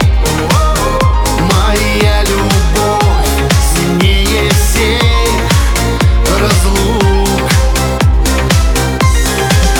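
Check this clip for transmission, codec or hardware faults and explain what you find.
No transmission, codec or hardware faults are audible anywhere in the clip.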